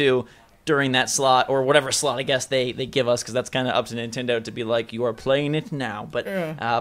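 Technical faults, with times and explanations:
No technical faults can be heard anywhere in the audio, and the signal stays steady and continuous throughout.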